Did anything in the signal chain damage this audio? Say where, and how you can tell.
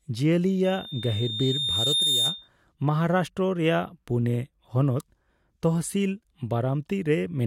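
Yes. There's loudspeaker feedback squeal in the analogue acoustic loop, from about 0.64 to 2.49 s. A single 3.6 kHz tone swells over roughly a second and a half to about the speech level. The mic is hearing its own speaker, and loop gain tops one there.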